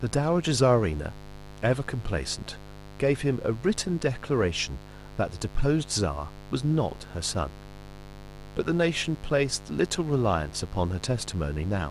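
A steady, raspy mains buzz runs under this speech throughout, built on 50 Hz with harmonics climbing into the kilohertz range, sitting roughly 20 dB below the voice; a spectrogram shows evenly spaced horizontal lines stacked at 50 Hz intervals.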